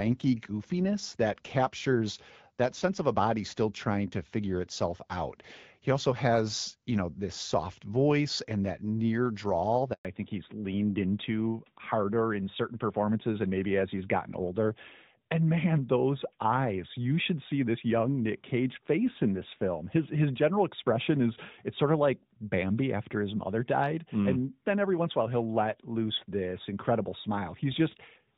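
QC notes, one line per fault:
9.93–10.05 s, handover gap: right after "and that near drawl" the sound cuts out for 120 ms while the call hops networks, so that bit's lost.
10.05 s to end, fallback to narrowband: nothing above 4 kHz from here on, duller and rougher, likely the call dropping from HD Voice to narrowband AMR.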